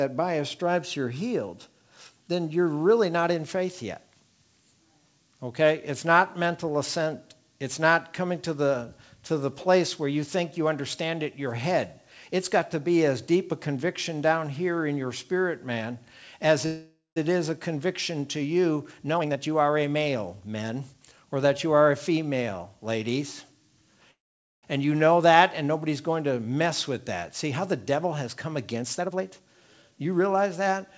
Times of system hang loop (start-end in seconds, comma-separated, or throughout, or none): none